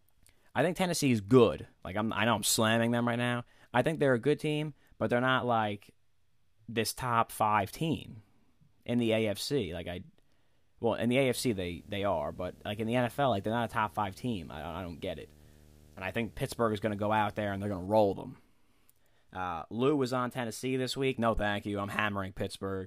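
Speech, with a video or display buzz coming in from 11.30 to 17.86 s, right after "well in the" and clearing before "roll them". It's a steady 75 Hz buzz with hash riding on top, sitting well down in the mix, maybe thirty-odd dB under the voice. That's a screen or video cable bleeding its field rate into the audio path.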